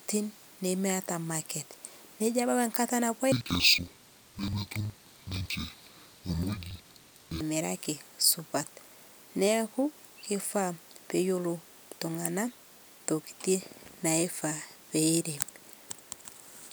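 From 3.32 to 7.44 s, the speech shows interleaved audio read as planar. Each block of alternating left and right samples is split wrongly, with the first half taken as left and the second as right. Each half then stretches over the whole block at half speed. The voice drops an octave and sounds doubled. It chops at about 21.5 Hz, one break every 46 ms, which fits a 2048-sample block.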